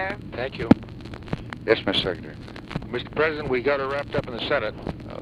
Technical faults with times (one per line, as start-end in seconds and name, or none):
none